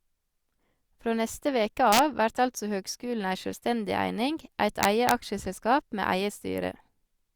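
Integer overflow hits at 1.93–1.99 s, between "neste veke" and "av vert altså høgskulen", and again at 4.83–5.11 s. Peaks pushed about 1 dB and 2 dB past the integer limit wrap to the opposite extreme instead of being held, so loud speech breaks into violent cracks far harsher than clipping.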